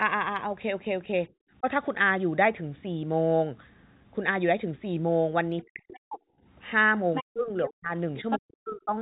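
Speech over a narrowband call line, with nothing above 4 kHz, which fits G.711 mu-law. It ducks repeatedly: a shallow, brief dip at 1.6 s, then much deeper drops, close to silence, at 5.62–6.2 s, 7.23–7.93 s and 8.38–8.93 s. This is speech suppressed in double talk, likely from an echo canceller that couldn't separate the talker from loudspeaker echo while both sides spoke, so it turned both down. A second voice also cuts in: faintly at 5.94–6.0 s, then nearly as loud as the talker at 7.14–7.23 s and 8.16–8.39 s. That is the other side's voice leaking through, likely loudspeaker output the echo canceller failed to remove from the microphone signal.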